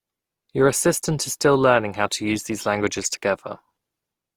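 Generation loss runs through the whole speech clip. The sound is swirly, hollow and smeared, and consonant attacks blur. Nothing reaches above 20.4 kHz. The likely cause is repeated lossy coding, perhaps around three passes through an Opus-like codec near 48 kbit/s.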